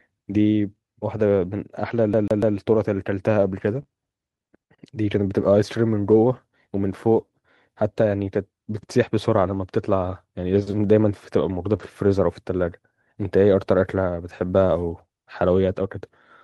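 From 2.13 to 2.57 s the speech sticks like a CD stuck on one turn: the same 145 ms slice plays three times, each jump marked by a brief mute, an exact, even stutter rather than a smeared fill. At 3.75 to 3.81 s comes a lost packet rebuilt from error correction: about 40 ms, which fits two packets, play from the low-bitrate copy, rougher and noisier but gapless. Right after, at 3.83 to 3.87 s, a short concealed packet loss leaves a 20 ms hole that is filled by extending the preceding sound, heard as a brief smear or wobble instead of a coarse but real copy. Another 20 ms error-correction rebuild follows at 6.11 to 6.13 s. At 11.77 to 11.81 s a concealed loss runs into a final rebuilt packet at 11.79 to 11.81 s, so a short extrapolated smear leads straight into a rough, noisier patch.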